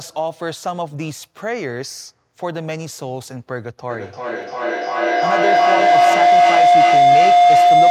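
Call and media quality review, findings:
Feedback howl, 3.9 s to end: acoustic loop between co-located call devices, gain above unity. Spectrogram shows a thickening line near 700 Hz, pulsing about every 0.3 s, peaking about 12 dB above speech.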